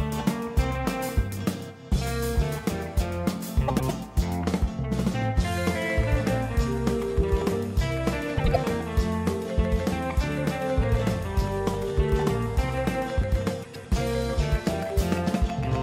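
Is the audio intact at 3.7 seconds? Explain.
No. Frames out of order run from 3.68 to 3.91 s. Two adjacent blocks of about 104.5 ms play swapped, which fits four frames each. The result is a garbled flutter. Unlike a dropout, no time is lost.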